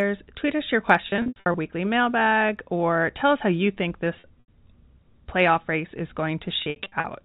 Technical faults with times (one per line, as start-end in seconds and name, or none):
1.10-1.54 packet loss with pitch repetition
4.20-4.48 packet loss with pitch repetition
6.62-7.04 packet loss with pitch repetition